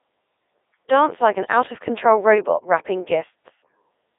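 Throughout, the speech has passed through the Codec 2 vocoder, consistent with its 3.2 kbit/s mode. Only pitch, voicing, energy and a spectral envelope are sent, and sine waves rebuild the voice. It sounds heavily robotic and buzzy, limited to 300 Hz to 3.7 kHz, with nothing above 3.8 kHz.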